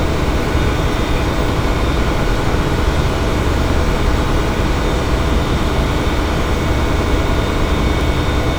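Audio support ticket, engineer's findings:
Engineer's findings: no fault found in the audio.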